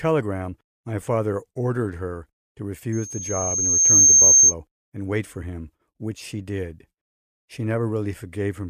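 A speech clip with a loudspeaker feedback squeal from 2.92 s to 4.54 s, between "father ordered her to" and "and wait for him". A single 6.4 kHz tone swells over roughly a second until it sits around 15 dB above the speech, because the microphone is picking up its own loudspeaker and the loop gain exceeds one at that frequency. That gradual self-reinforcing build distinguishes it from an interfering whistle or tone, which would arrive at full level.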